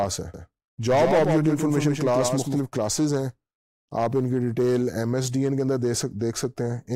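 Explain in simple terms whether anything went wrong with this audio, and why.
From 0.34 to 2.6 seconds there is a doubled audio track. A second copy trails about 0.15 seconds behind, likely from a slower recording path.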